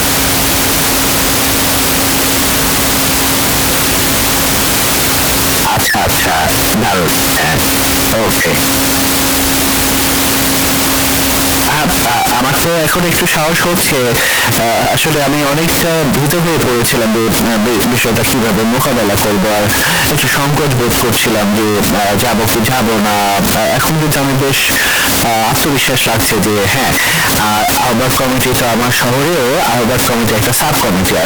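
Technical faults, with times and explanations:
Throughout, float read as integer: the speech is extremely loud and harsh, its waveform pushed into a near-square shape at an almost fixed, high level, with background noise standing as loud as the talking, though pitch can still be followed. The likely cause is 32-bit floating-point samples being interpreted as 32-bit integers, so each sample's sign and exponent bits, rather than its true amplitude, set the level, flattening quiet and loud passages to the same blaring height.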